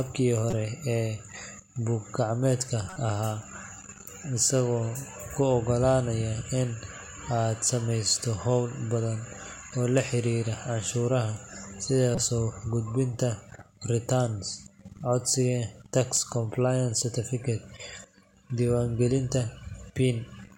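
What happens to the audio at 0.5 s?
A corrupt frame decoded, from 0.50 to 0.53 s: a couple of damaged frames play with misread codes, giving a brief burst near -15 dBFS.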